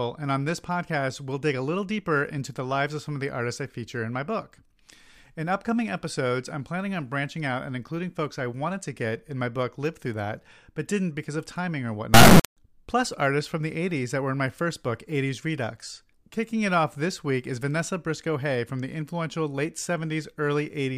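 At 12.14 s, just after "because of timing or", the 32-bit integer samples are read as 32-bit float, an integer read as float fault. The values land at near zero or far past full scale, so until 12.57 s the speech becomes a harsh, extremely loud buzzing square wave.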